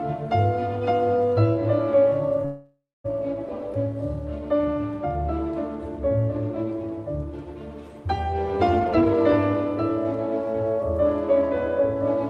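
From 2.45 to 3.06 s there is a call audio freeze: the jitter buffer likely ran dry when packets stalled. The last sound is stretched into a fading buzz that ends in about 0.23 s of silence, and the audio then resumes where it stopped, with nothing lost. From 8.79 to 9.90 s, and again from 10.46 to 12.04 s, the jitter buffer speed-up trims repeated pitch-period slices to shed excess delay. The first stretch plays at 131% speed, dropping roughly 0.4 s and sounding rushed, and the second plays at 104%, losing around 70 ms.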